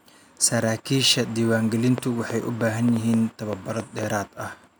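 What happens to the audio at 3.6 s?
At 3.6 s the speech sits inside a train of clicks running from 1.98 to 4.04 s: about ten similar sharp pulses, roughly 4.4 per second but unevenly spaced, each standing out around 10 dB above the speech. The likely cause is interference from nearby equipment or a faulty connection or power supply. It sounds like ticking over the speech and in its pauses. Unlike a single isolated click or dense crackle, these repeat with the same shape at a countable pace.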